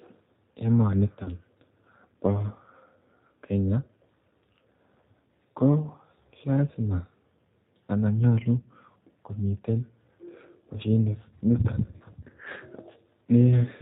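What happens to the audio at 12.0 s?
Right after "mashinit niton", from about 11.98 to 12.03 s, the speech briefly smears into a short held sound that dips in level and then recovers, with the voice sounding weak and altered for a moment after. This is VoIP packet loss concealed by the speech codec. A gap of about 20 ms, which fits a single lost packet, was filled by the decoder repeating its last pitch and vocal-tract filter at falling gain. Because each frame builds on the previous one, the distortion lingers a little past the gap itself.

The whole clip, including this moment, also carries the G.729 codec's sound. The speech is dull and band-limited, with nothing above 4 kHz, and has a plainly audible rough, synthetic texture. That character fits G.729A at 8 kbit/s, which rebuilds each 10 ms frame from a filter, a pitch predictor and a few pulses.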